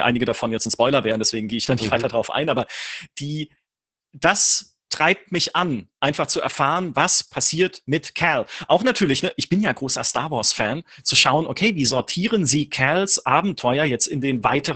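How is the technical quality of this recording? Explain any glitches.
Quality's pretty rough, since the whole recording carries heavy Opus voice compression. From start to finish the speech sits in a narrowed band, nothing much above 8 kHz, so it's muffled. The SILK linear-prediction coder is squeezing the excitation coarsely, which fits a bitrate around 10 kbps, and that leaves the speech hoarse and faintly robotic.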